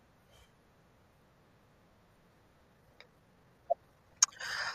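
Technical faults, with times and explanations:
2.61–4.74 s, time-stretched section: from here to the end the speech suddenly hurries along at about 1.4 times its earlier pace, sounding rushed while the pitch stays put, likely because software squeezed this stretch by dropping short slices to shorten it.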